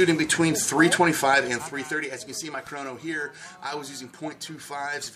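From 1.23 to 2.18 s, a fast ticking or zipping rides on the sound as its level falls by roughly 15 dB. This is zipper noise: the gain drops in coarse steps, some forty a second, without smoothing, so each jump leaves a small click.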